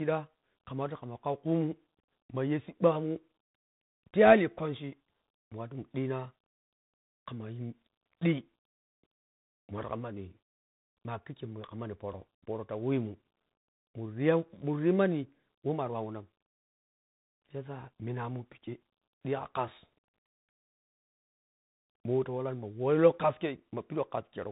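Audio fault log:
Throughout: tandem speech coding. The speech has passed through more than one speech codec in a row, with decoding and recoding at each handover. The chain sounds consistent with CVSD, then G.711 mu-law, then G.726 at 40 kbit/s. Each stage codes the previous stage's errors along with the speech. The damage adds up. The result is rough, muffled and noisy. Nothing is left above 3.8 kHz, which dulls the consonants.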